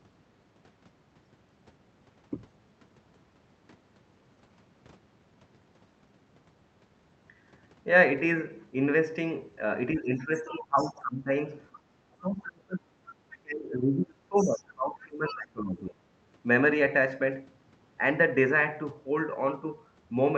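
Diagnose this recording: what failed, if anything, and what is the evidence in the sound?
Speech suppressed in double talk, in call processing: gain dips of about 20 to 25 dB at 9.93–11.32, 12.20–12.91 and 13.42–15.99 s, likely from echo-canceller ducking.

Other side's voice leaking through, also in call processing: a faint second voice, about 15 to 25 dB below the speech, at 10.38–10.92, 11.74–11.80, 13.31–13.38, 14.38–14.60 and 15.26–15.35 s. This is likely residual loudspeaker echo, not crosstalk, because it clusters around the suppression dips.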